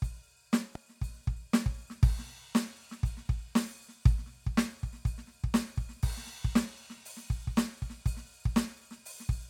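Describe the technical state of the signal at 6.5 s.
At 6.5 s the music plays through intact, with no dropout, click, distortion or other fault at that point.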